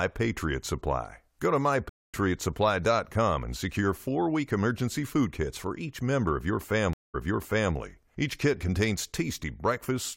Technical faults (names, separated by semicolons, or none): stream reconnect